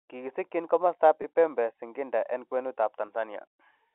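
At 1.22–1.24 s and again at 3.06–3.08 s, packet loss with pitch repetition bridges a 20 ms gap, each fitting one lost packet. The receiver replays the last pitch period, so the sound briefly holds with a slight buzz over the narrow G.711 telephone band.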